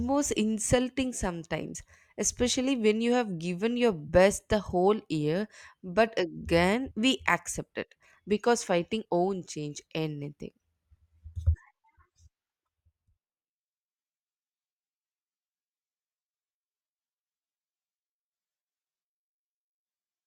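A brief jump ahead at 1.74 s, just before "especially when you have", marks compressed frames skipped: a couple of frames, which fits 24 ms frames, dropped out, so roughly 50 ms of audio is lost.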